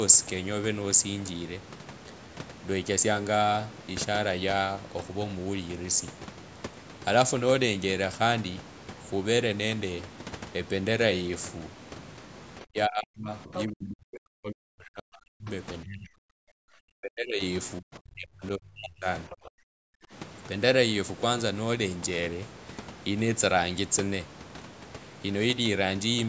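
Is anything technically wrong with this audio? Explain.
Yes. Between 12.64 and 20.13 s the speech is suppressed in double talk four times: 12.64 to 15.5 s, 15.84 to 17.42 s, 17.8 to 19.06 s, and 19.29 to 20.13 s. The voice sinks by roughly 35 to 40 dB. The likely cause is an echo canceller that could not separate the talker from loudspeaker echo while both sides spoke, so it turned everything down.

Inside the first dip, from 13.54 to 13.64 s, the other side's voice leaks through. It is a brief scrap, only slightly quieter than the speech. The canceller apparently failed to remove all of the loudspeaker signal from the microphone. The call microphone processing leaves nothing above 8 kHz.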